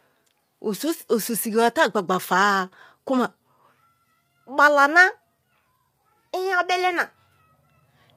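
Throughout the speech the sound is rough and grainy, with noise filling the gaps between pitch harmonics. This is likely low-delay AAC compression: short frames blur harmonic detail, unlike standard AAC's smearing, and the damage is plainly audible, fitting roughly 32 kbps.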